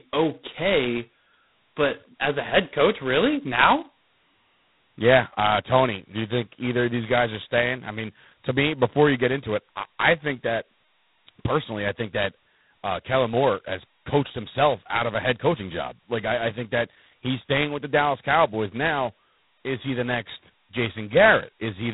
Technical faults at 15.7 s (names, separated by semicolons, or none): G.726 ADPCM